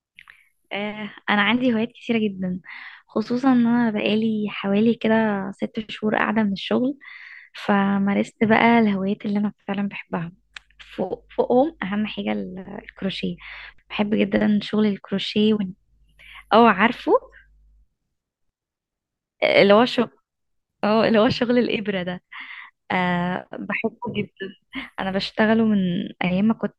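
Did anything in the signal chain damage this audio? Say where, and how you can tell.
No, no signal-chain damage heard.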